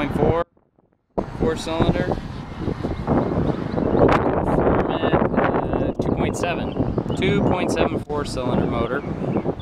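An audio dropout to a faint residue runs from 0.43 s to 1.17 s, cutting out about three quarters of a second of the sound. The signal vanishes abruptly rather than fading, and the gap is not silent: a faint leak of the material remains, roughly 40 dB below its normal level. The likely cause is a brief loss of the wanted feed while the downstream path stayed live, so only crosstalk-level residue carried through until the signal snapped back.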